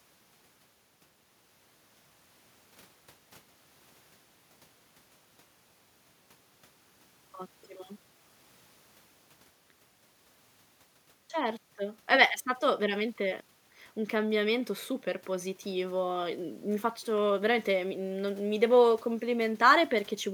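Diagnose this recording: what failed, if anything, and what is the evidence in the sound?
Nothing in this speech recording points to a failure at any stage, from the wiring and converter through to storage and playback, so there's no fault to diagnose here.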